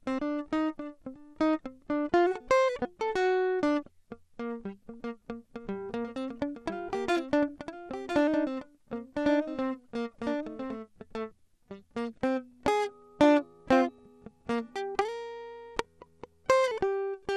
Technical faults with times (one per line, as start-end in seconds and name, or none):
0.00-17.36 MP2 compression
5.89-10.77 doubled audio track
13.98 DAB burbling